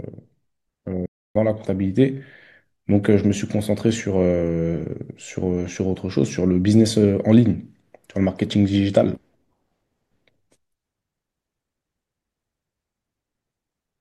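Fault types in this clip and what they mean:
Playback stall: the speech cuts off mid-flow at 1.06 s and the output stays silent for about 294 ms, resuming at 1.36 s. The likely cause is the player running short of buffered data or its audio thread being held up, so nothing was sent to the output until it caught up. On a waveform it appears as an abrupt flat line between active signal; on a spectrogram, a clean vertical blank band across all frequencies.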